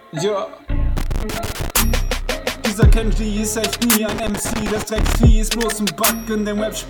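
Two bursts of loose connector crackle break up the audio, the first from about 0.96 to 1.70 s and the second from 4.09 to 5.15 s, roughly three-quarters of a second and just over a second long. Both have that irregular scratchy, spitting texture you get when a worn or dirty contact keeps making and losing its connection as the plug shifts. The signal gets chopped on and off, and any DC sitting on the line adds little pops.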